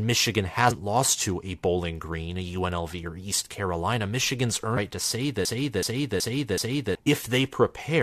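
Speech, marked by damaged data in a compressed stream at 0.70 to 0.72 s, 4.76 to 4.78 s and 7.06 s: corrupted frames make the decoder misread and resync, giving brief glitches. A broken-record loop runs from 5.45 to 6.95 s, a 375 ms fragment repeating four times, likely because the player, encoder or stream stalled and resent its last buffer, losing the audio meant for that span.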